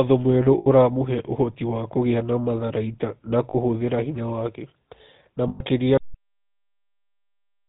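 A speech clip that has passed through the GSM full-rate codec, which fits the 13 kbps full-rate GSM coder. It rebuilds the vocal tract from a model excited by a sparse, regularly spaced pulse train and passes nothing above 4 kHz, so the speech sounds dull, buzzy and gravelly throughout. It also has lost GSM frames at 0.58 to 0.67 s, 3.50 to 3.56 s and 5.48 to 5.62 s, gaps of roughly 80, 40 and 120 ms. In each, the decoder reused the last good frame's parameters, so the sound freezes into a rough, metallic ring instead of going on. Finally, the recording has a cut-off end at 5.97 s, where the final buffers were never written out. The speech stops mid-sound and drops straight into digital silence with no natural decay.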